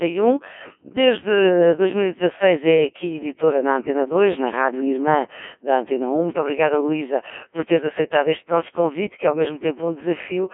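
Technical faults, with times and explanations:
Throughout, Codec 2 vocoder: the speech sounds heavily robotic and buzzy because it's rebuilt from sine waves using only pitch, voicing, energy and envelope, so the real waveform's gone. The damage fits a 1.6 kbit/s mode. The band runs 250 Hz to 3.4 kHz, with nothing above 3.7 kHz.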